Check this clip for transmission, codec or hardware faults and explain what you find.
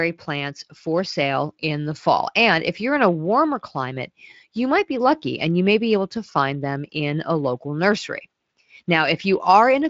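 I checked this clip and found no faults to explain.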